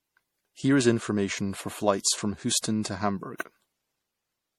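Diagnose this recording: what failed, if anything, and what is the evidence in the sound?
Generation loss throughout the speech, at the codec stage. The sound is swirly and hollow, with smeared, blurred consonant attacks, and nothing reaches above 17.7 kHz. The smearing is heavier than a single encode at a bitrate near 64 kbit/s would produce, so the likely cause is repeated MP3 decoding and re-encoding, roughly five passes. Each pass quantises on a shifted frame grid, so the noise and spectral holes stack up.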